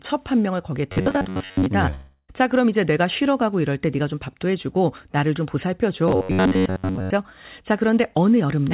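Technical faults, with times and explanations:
0.92–1.66 s and 6.08–7.13 s, robotic sound from repeated short buffers: in both stretches the speech turns into a rigid, metallic buzz at about 93.8 Hz that only loosely tracks the syllables. A fixed tone near 94 Hz corresponds to a period of about 10.7 ms, which is likely a playout routine re-sending a chunk of that length whenever fresh audio is late. Most of each stretch is repeated material rather than real signal.
1.94–2.30 s, long network dropout: about 340 ms of audio never plays. Concealment fills about 344 ms, first extending the preceding sound as a fading buzz or hiss and then leaving roughly 20 ms of near-silence before speech resumes with that portion gone. This pattern points to a likely interruption of incoming packets long enough that the receiver had nothing new to decode, with the whole passage heard through a telephone-band path that carries nothing above 4 kHz.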